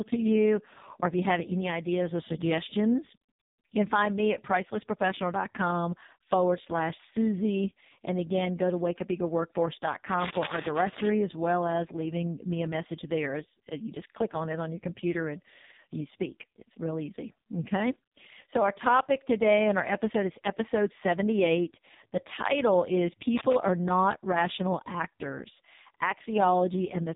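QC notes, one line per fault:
throughout, AMR narrowband mobile codec: heavily buzzy, synthetic speech with nothing above 3.8 kHz, as from a very low-rate AMR-NB mode, which fits about 4.75 kbps.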